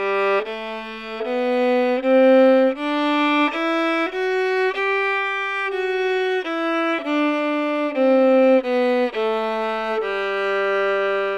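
A recording of sounds, with no technical fault to be heard anywhere in it. There is no moment in the audio that calls for a time or a cause.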